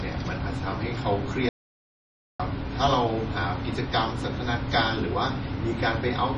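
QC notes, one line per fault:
throughout, MP3 compression: nothing above 10.4 kHz and a heavily watery, swirling speech texture, likely from low-bitrate MP3 encoding around 32 kbps, unlike plain filtering, which leaves no swirl.
1.49 to 2.40 s, audio dropout to silence: speech stops dead for about 0.91 s into silence with no room tone, likely a lost input, not a fade or gate.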